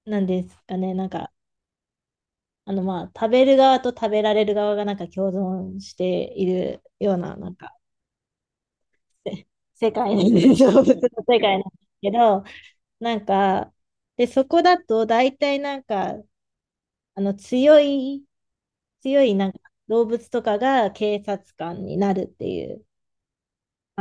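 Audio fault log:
Nothing stood out on listening to the speech recording.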